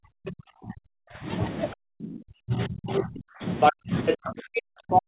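Right from the start, 0 to 1.26 s, the talker gets pushed down hard, dropping by roughly 40 dB, and it happens again from 1.72 to 3.42 s. That's speech suppressed in double talk, most likely an echo canceller that couldn't separate the near talker from the far side coming out of the loudspeaker, so it ducked everything. It shows up again briefly from 3.71 to 3.93 s, and once more from 4.16 s through to the end, with the same deep dips.

Between and across those dips, the other side's voice leaks through in short scraps: 3.6 to 3.73 s, 4.06 to 4.33 s, a quick 4.55 to 4.62 s, and 4.9 to 5.01 s. The canceller, likely, didn't fully subtract the loudspeaker signal from the mic. The scraps come in at roughly 10 dB, 5 dB, level with, and 10 dB relative to the talker. Everything sits inside a narrow G.711 phone band topping out at 4 kHz.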